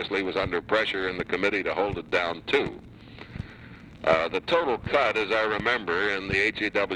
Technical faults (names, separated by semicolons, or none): none